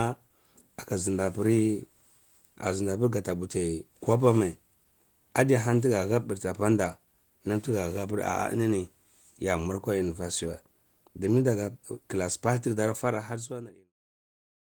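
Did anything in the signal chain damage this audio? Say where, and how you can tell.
No, nothing in the chain damaged this recording; it's speech that runs through Opus compression with only light codec colouring and a hybrid-mode band that reaches up to about 20 kHz, then fades out smoothly to nothing by 13.94 s.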